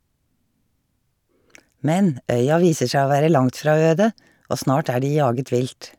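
Nothing in the speech stood out as a technical problem on listening.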